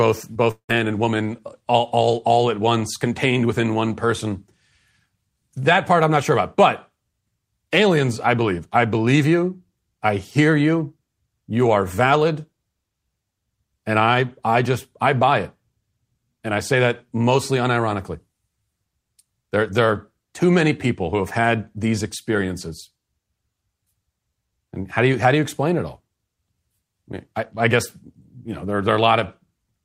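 Short concealed packet loss at 0.33 to 0.37 s, right at the start of this speech recording, leaves a brief smear where about 20 ms of audio never arrived in time. The receiver papered over roughly 17 ms of the gap by extending the preceding sound and then blending back into the real signal, so the join is heard as a wobble rather than a clean cut. Moments later, from 0.51 to 0.71 s, the sound stretches into a fading buzz or hiss and then drops to about 90 ms of silence before resuming at "and woman all all". That pattern is most likely a long network dropout: around 180 ms of audio went missing, the receiver filled about 176 ms by continuing the last sound as it decayed away, and when the real signal returned, the lost stretch was simply absent rather than delayed.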